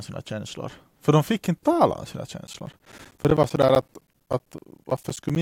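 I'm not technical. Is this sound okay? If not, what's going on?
No. Periodic USB or driver dropouts start at 2.47 s, just after "inte tala om sina", and run to 5.36 s. Every 0.064 s a background task interrupts the audio connection, cutting roughly 10 ms to silence each time and producing a steady stream of ticks through the speech.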